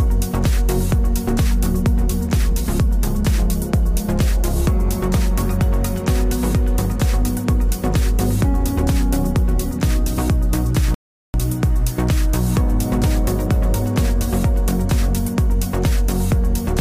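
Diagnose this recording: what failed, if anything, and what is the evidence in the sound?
At the playback stage, the player likely ran dry of buffered data or had its output thread blocked, causing a playback stall. The sound cuts out mid-flow from 10.94 s to 11.34 s, a silent gap of about 0.4 s, before output resumes once the player recovers.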